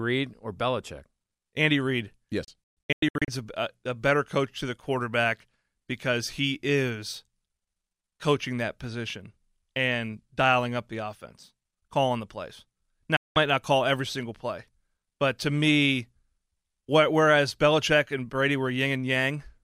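Speech with two digital broadcast dropouts: from 2.44 to 3.28 s the receiver mutes in quick-faded short holes just before "a a better coach", and at 13.16 to 13.36 s after "offense calling the plays".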